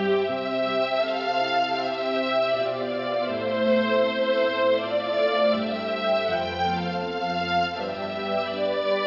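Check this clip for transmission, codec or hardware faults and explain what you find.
Nothing in the clip points to a fault. There is no event to report anywhere in it.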